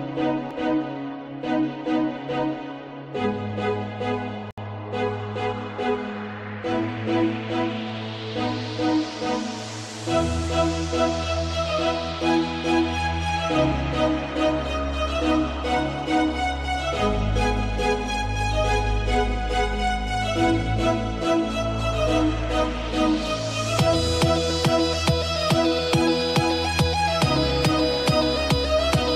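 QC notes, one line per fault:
4.51–4.58 s, gap at a join of encoded pieces: a 68 ms hole in continuous sound, which then resumes where it stopped. Two separately encoded pieces were joined untrimmed, so one's end-frame padding and the next's start delay both remain, edges smeared by the codec.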